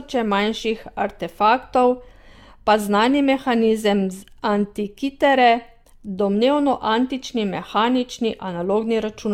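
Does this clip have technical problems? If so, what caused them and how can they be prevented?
Yes. Generation loss runs through the whole clip. The speech sounds swirly and hollow, and consonant attacks are smeared. Nothing is left above 17 kHz. The artefacts are heavier than one pass at this quality would leave, which fits AAC at around 96 kbit/s. The likely cause is repeated decoding and re-encoding, perhaps about seven times. Each pass quantises again on a shifted frame grid, so noise and spectral gaps pile up. To prevent it, keep a lossless master and encode to a lossy format only once, at the final step.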